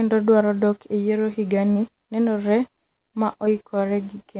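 At 1.72 to 1.77 s the sound briefly smears or wobbles, and at 3.45 to 3.49 s there is a shorter smear. Both are short concealed packet loss. About 40 ms, then about 20 ms, of audio arrived too late for the decoder. The receiver papered over each gap by extending the preceding sound before blending back, all within a band that stops at 4 kHz.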